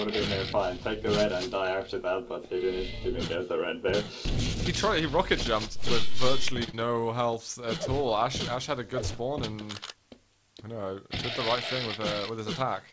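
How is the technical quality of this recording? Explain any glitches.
The recording has two back-to-back network glitches near the middle and a hurried final stretch, all over a call-codec band limit with nothing above 8 kHz, consistent with G.722.

From 6.64 to 6.69 s there is a short stall from a late packet. The buffer ran dry, so the last sound is held about 35 ms, then resumes intact. It is a stretch, not a gap.

Immediately after, from 6.69 to 6.75 s, comes short concealed packet loss. About 40 ms never arrived and was replaced by extrapolated sound, giving a brief smear. Unlike the stall, real audio is lost here.

From 12.30 s to the end there is a jitter buffer speed-up. Pitch-period slices totalling roughly a twentieth of a second were trimmed, so the audio plays about 7% faster at unchanged pitch and sounds rushed.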